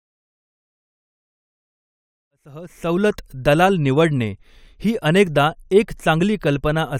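There are no technical faults in this speech; the level simply rises gently from around 2.5 s and reaches full by 3.42 s.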